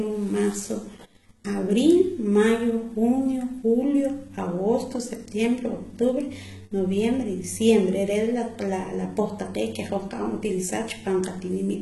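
Throughout the speech, s sounds come out gritty and lispy, the treble sounds bright but synthetic, and nothing is present above 11.8 kHz. This likely points to heavy HE-AAC compression at a rate near 16 kbps, rebuilding the upper band from copied lower harmonics that no longer align.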